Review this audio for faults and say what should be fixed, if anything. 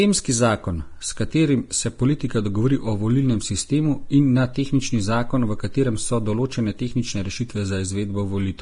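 Throughout the speech, the top end stops dead at about 10.6 kHz, and the remaining treble is hissy and grainy, with sibilants turned to rough noise and consonant attacks smeared. The likely cause is heavy Vorbis compression at a low quality setting, consistent with a bitrate around 32 kbps. At that rate the encoder lowers its cut-off and quantises the upper bands so coarsely that fine detail is replaced by noise of similar energy. To prevent it, keep the original recording or encode at a substantially higher Vorbis quality setting.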